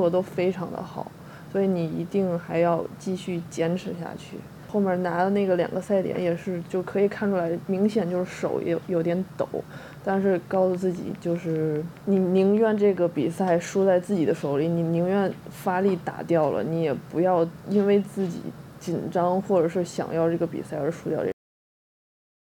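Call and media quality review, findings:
Train of clicks, 9.93 to 12.98 s. Regular ticking at about 4.9 clicks per second, roughly fifteen pulses of near-identical shape, peaking at about signal level and audible over the sound. Likely cause: periodic interference from nearby equipment or a faulty connection or power supply injecting a pulse into the path.

Cut-off end, 21.32 s. Sound stops mid-event, dropping straight to digital silence with no decay through the final stretch. Final buffers never written or played out, pointing to capture or file finalisation ending early.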